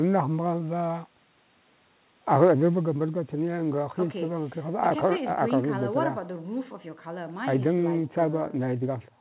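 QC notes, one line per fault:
No faults; the 4 kHz call band is normal.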